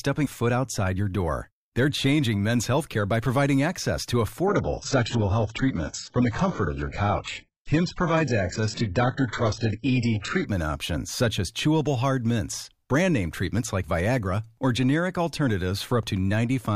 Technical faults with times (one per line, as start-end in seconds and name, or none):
4.47-10.47 adaptive stream at a lower bitrate